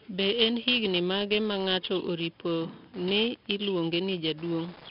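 4-bit ADPCM compression runs through the whole speech clip. Each sample is coded as a coarse 4-bit step away from a predicted value, with the step size adapting as the signal changes. The damage here is heavy. A gritty hiss rides on every loud syllable and rises and falls with the speech level, and sharp onsets distort because the step cannot grow fast enough. Nothing is heard above 5.4 kHz, which dulls the top end and fits a low-rate stream of around 44 kbps.

Wi-Fi interference starts at 2.52 s and lasts to the end. A nearby Wi-Fi radio's transmissions are being picked up and rectified by the audio circuitry. The result is a steady tick repeating every 102.4 ms, roughly ten times a second, which matches a beacon interval. The interference sits about 25 dB below the speech.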